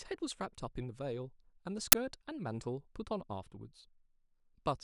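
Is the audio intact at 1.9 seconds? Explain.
No. At 1.92 s an uninitialised buffer plays leftover memory as samples: a sudden, loud burst of digital noise lasting about 11 ms, which fits a 512-sample buffer. It is louder and noisier than a simple click, and not silent like a dropout.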